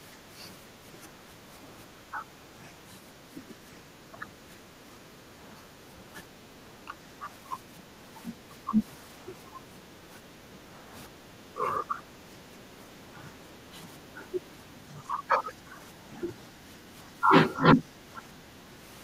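Speech suppressed in double talk at 0.12–4.26 s, 5.55–5.75 s, 6.85–12.71 s and 13.72–18.85 s: the speech dips in patches by roughly 10 dB, about 15 dB at worst, likely an echo canceller ducking it while the far side talked.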